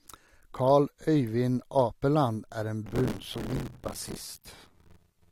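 Buffer tearing runs from 2.86 s to the end of this speech clip, heard as a robotic buzz at 86.1 Hz that is present only while there is speech. The writing side and the reading side of the playback ring buffer have drifted so their positions cross inside each period. Roughly 30 percent of every block is stale audio from about 20 ms earlier, with hard joins at both edges. The repeat rate fits a 512-sample buffer.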